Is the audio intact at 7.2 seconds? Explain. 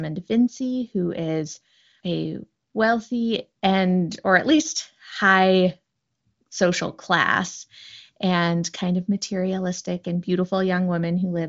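Yes, the audio is intact at 7.2 seconds, with no fault at that moment.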